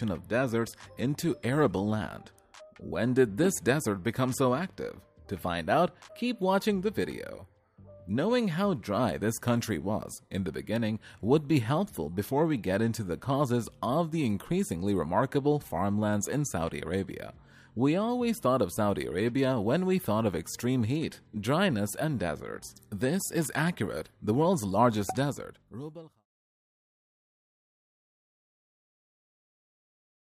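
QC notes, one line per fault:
Nothing stood out on listening, and the smooth fade-out that starts at around 25 s and ends at 26.27 s sounds like a deliberate editor's fade.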